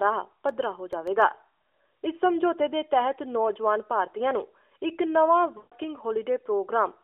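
A narrowband speech recording, band-limited to roughly 300 Hz to 3.4 kHz by the AMR narrowband mobile codec, with light coding roughness. From 0.49 to 1.22 s there are six CD scratch ticks. The longest lasts about 1.5 ms. They come at a steady rate, once per disc turn, where a scratch wiped out more data than error correction could rebuild. From 5.58 to 5.73 s there are lost AMR speech frames. The sound smears and sags for 140 ms, which fits seven dropped 20 ms frames. The decoder repeated the last good settings with falling gain. It then recovers, briefly weak or rough.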